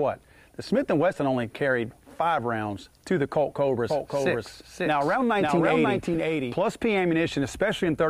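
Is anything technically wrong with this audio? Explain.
Yes. From 3.90 to 6.58 s the sound is doubled: a second full-band copy trails about half a second behind, a few dB quieter, with no room colour, and it starts and stops abruptly. This is likely a doubled audio track, the same signal arriving twice through a slower path.

At 6.13 to 6.16 s a brief glitch of misplaced energy appears, peaking at about -25 dBFS. This is a corrupt frame decoded: damaged bits in one compressed frame were played anyway, scattering energy across wrong frequencies.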